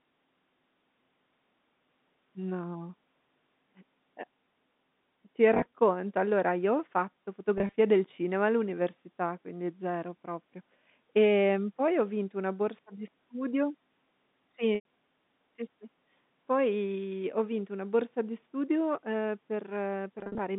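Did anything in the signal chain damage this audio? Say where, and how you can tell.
Yes. The network stage dropped packets at 5.54–5.66 s, 7.58–7.76 s, 14.75–14.84 s and 20.19–20.39 s. The receiver filled each gap by repeating the last pitch period, so the speech briefly holds a buzzy, frozen tone. The final, longest burst dips toward silence before recovering.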